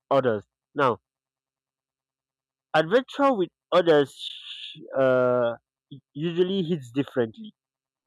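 Nothing goes wrong anywhere in this bit of speech, so there's no technical fault to point to at any moment.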